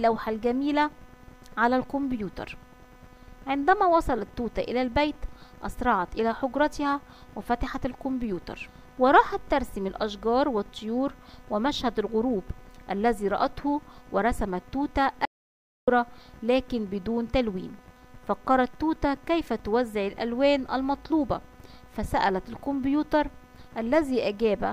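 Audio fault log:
15.25–15.88 s, audio dropout to silence. The sound cuts off mid-flow into about 0.62 s of silence, with no room tone. The input was likely lost while silence kept being written.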